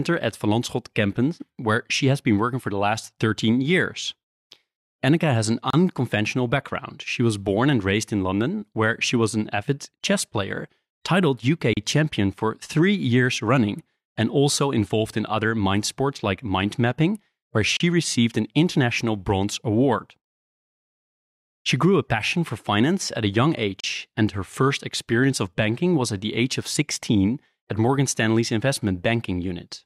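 Speech with a gap at a join of encoded pieces every 6 s: silences of 31 to 34 ms at 5.70 s (after "has an"), 11.73 s, 17.77 s and 23.80 s, from separately encoded segments joined untrimmed.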